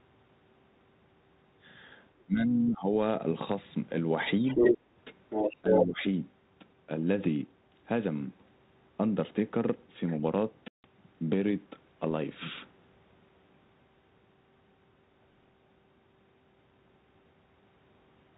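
From 2.19 to 2.23 s a very faint second voice slips in, the other side's voice leaking through, most likely loudspeaker echo the canceller failed to remove. It returns from 4.45 to 4.78 s and 5.29 to 5.85 s, now slightly louder than the talker. On a spectrogram it shows as extra harmonic traces overlapping the main speech.

From 2.25 to 2.88 s, and again from 5.62 to 6.04 s, the talker's speech is suppressed in double talk. The level dips by as much as about 15 dB, likely because the canceller turned everything down while both sides spoke. The waveform envelope sags.

At 10.68 to 10.86 s, packet loss on this ADPCM call cuts a 160 ms hole, which points to several lost packets. It shows as a flat, square-edged gap in the waveform and a blank vertical band on the spectrogram. Speech returns slightly distorted before settling within tens of milliseconds.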